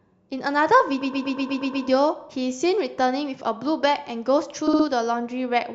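At 1.01 s the speech starts stuttering from repeated frames: a 120 ms block of compressed audio was delivered more than once, so the decoder plays the same fragment eight times in a row until 1.85 s, stretching the clip by 0.84 s. At 4.67 s a shorter 60 ms block plays four times, ending at 4.86 s and adding 0.18 s. On a spectrogram each event appears as identical slices tiled side by side, and the waveform shows the same envelope copied at a fixed interval.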